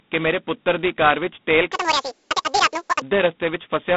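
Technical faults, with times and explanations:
Throughout: G.726 ADPCM. The whole clip sits in a narrow phone band, roughly 150 Hz to 3.6 kHz, with nothing at all above 4 kHz. On top of that there's a heavy, rasping hiss that rides up and down with the speech level. That's what you get when each sample is squeezed into just a couple of bits of difference from a running prediction. The roughness points to G.726 at its lowest rate, 16 kbit/s.
1.72 to 3.02 s: section at the wrong speed. For about 1.3 s the speech runs at double speed, so it comes out hurried and squeaky, with the pitch jumping up around 10 semitones along with the tempo. Speed and pitch shift together and snap back at 3.02 s, which points to that stretch likely being played or edited against the wrong clock rather than being any kind of deliberate effect.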